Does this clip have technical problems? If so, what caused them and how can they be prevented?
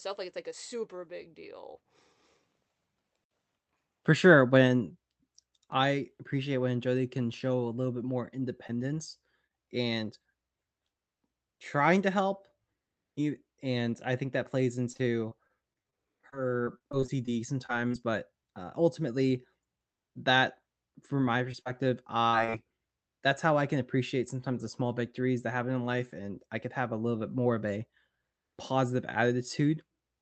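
Yes. Scattered short gaps: after "little bit more", between 8.67 and 9.69 s, a few packets went missing and were patched by extending the preceding sound, leaving small hiccups of up to around 30 ms. A steadier network link or a slightly deeper jitter buffer would prevent these.

Repeated packet loss (robotic sound): from 14.93 to 17.96 s, after "I think that plays" and before "but uh ultimately", 18 losses were concealed in quick succession, the longest 26 ms. From 21.52 to 22.55 s, after "that from my", another 5 losses occurred, the longest 43 ms, with concealment covering 16% of that stretch. Both bursts sound choppy, with pieces missing. The call travels through Opus with audio limited to 8 kHz. Reducing network congestion, preferring a wired connection and enabling forward error correction would prevent this.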